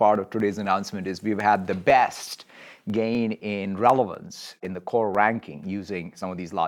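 From 0.15 s to 6.39 s the speech carries periodic USB or driver dropouts: every 0.25 s a sliver of well under a millisecond is skipped, about thirty times, giving evenly spaced ticks that vanish in pauses. Their strict regularity sets them apart from random clicks.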